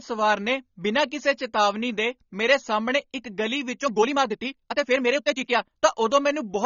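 From the start, the speech is dull and swirly, with fizzy sibilants and a lowered top end. A spectrogram shows a flat ceiling at the cut-off and gappy, blotchy bands beneath it, which fits AAC compression, likely AAC-LC at a low bitrate near 24 kbps.

At 3.74 s, right after "ਮੇਰੇ ਸਾਹਮਣੇ ਇੱਕ ਗਲੀ", the pace jumps to about 1.55 times normal until 5.80 s while pitch holds, sounding choppy and rushed. This is a time-stretched section, likely made by dropping short slices, which shows as compressed waveform envelopes with unchanged harmonic spacing.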